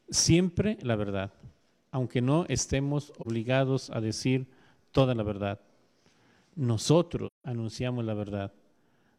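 AAC frame loss with muting appears twice, from 3.21 to 3.27 s and from 7.26 to 7.45 s. The decoder received no data for these stretches, so it zeroed their spectral content. The overlapping transform windows fade the sound out into silence and back in rather than cutting it off abruptly. The first hole lasts about 43 ms, which fits one lost frame. The second lasts about 171 ms, consistent with four consecutive frames missing, and is a clearly longer dropout.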